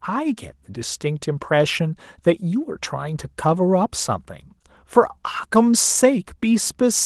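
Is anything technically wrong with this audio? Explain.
No, nothing is technically wrong with this audio.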